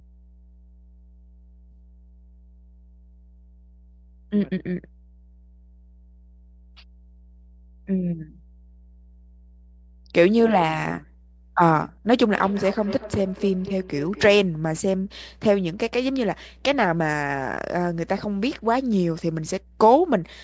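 Mains hum runs through the whole clip as a steady 60 Hz tone with low harmonics, roughly 20 dB under the speech. A ground loop or nearby transformer is letting the power line leak into the signal path, so the buzz never changes with the talking.

Feedback echo between two devices appears from 12.28 to 14.5 s. The speech returns at roughly one-fifth-second intervals, the loudest repeat about 15 dB below the original, each pass thinner and more ringing, because a second device nearby replays the call into the microphone.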